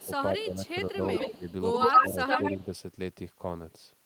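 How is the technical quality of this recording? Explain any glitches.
The recording has two recurring faults, echo leak and speech suppressed in double talk, that overlap through its first 2.7 s.

Echo leak appears twice. The likely cause is an echo canceller on a loudspeaker end that failed to remove what its microphone picked up and sent it back. From 0.0 to 0.09 s a faint copy trails the voice by 143 ms, about 25 dB below it. From 0.66 to 2.64 s a second copy, 110 ms late, is louder than the speech itself, so the voice sounds doubled and smeared.

Speech suppressed in double talk happens three times, likely because the echo canceller could not tell the talker from the returning echo while both were present and turned everything down. From 0.06 to 1.02 s the voice dips in pieces totalling about 0.4 s, by around 10 dB at worst. At 1.37 to 1.46 s there is a sharper dip of about 15 dB. From 1.85 to 2.71 s pieces totalling about 0.3 s drop by around 10 dB, making the voice sound choppy and uneven.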